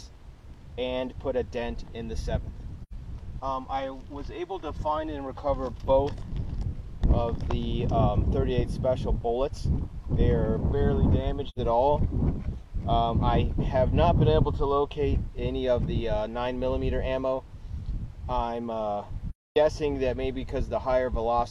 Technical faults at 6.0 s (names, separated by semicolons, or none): none